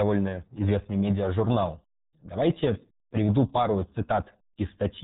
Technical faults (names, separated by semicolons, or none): RealAudio 14.4 codec